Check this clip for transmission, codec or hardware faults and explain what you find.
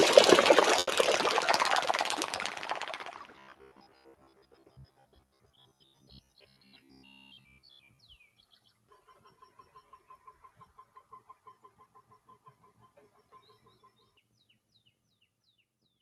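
Four kinds of fault are present, and one of them runs through the whole clip. Underneath them, the audio also carries the usual coding noise of an Opus call path, with the top end ending near 12 kHz.

Noise suppressor applied to music or sounds (throughout): Held sounds and ambient tails keep sinking and recovering, swinging by about 5 dB, while sharp onsets mostly come through intact. The result is a pumping, thinned texture. A suppressor tuned for speech treats anything steady, such as sustained tones, room sound or decay, as background noise and turns it down. Transients escape because they don't look stationary.

Short stall from a late packet (0.79 to 0.90 s): The sound briefly hangs, smeared and slightly buzzy, for about 80 ms, then carries on without a gap. A packet arrived late, the jitter buffer ran dry, and the receiver stretched the last audio it had until the packet showed up. 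Nothing is lost. The playout is now running about 80 ms behind where it was.

Robotic sound from repeated short buffers (3.36 to 7.99 s): For over four seconds the sound turns into a rigid metallic buzz at about 66.7 Hz, only loosely tracking the original. The likely cause is audio arriving too seldom, with the software filling each gap by looping the last block. The buzz rate fits a block of about 15 ms. Most of the passage, roughly 70 percent, is repetition rather than real audio.

Jitter buffer speed-up (11.75 to 12.03 s and 15.01 to 15.21 s): Both spots sound briefly rushed at unchanged pitch, at 111 and 116 percent speed respectively. In each, about 40 ms was cut out. The buffer had built up more audio than it aims to hold, so the receiver trimmed small pitch-period-sized slices in quick succession to bring the delay back down. That disturbs the natural timing of whatever is sounding at those moments.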